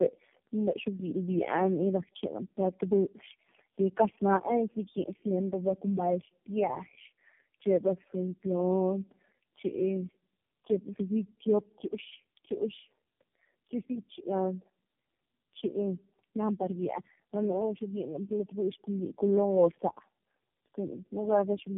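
Throughout, the speech shows tandem speech coding: it sounds as if it was decoded and re-encoded about four times by a low-rate AMR-NB-style codec, with G.711 links between. Each pass compounds the last, leaving rough, muffled, warbly speech with nothing above 3.6 kHz.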